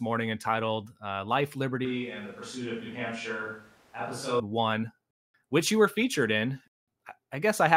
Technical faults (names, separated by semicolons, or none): switch to a distant microphone